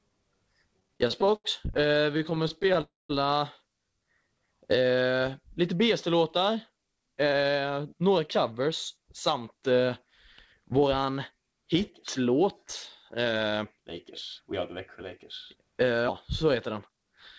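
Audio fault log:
0.80–2.77 s, repeated stalls (stutter): late packets emptied the jitter buffer 34 times, gaps up to 81 ms filled by continuing sound, so it drags, nothing lost.
2.81–3.11 s, call audio freeze: sound hangs and fades, about 190 ms silent, likely from packets held up and an empty buffer, adding 282 ms delay.
3.90–4.48 s, jitter buffer slow-down: repeated pitch periods add 78 ms, playing at 88% speed with unchanged pitch and drawn-out sounds.
6.37–9.42 s, 15.55–16.05 s, 16.71–17.13 s, jitter buffer speed-up: trimmed pitch periods shed excess delay, running at 108% then 111%, sounding hurried at the same pitch.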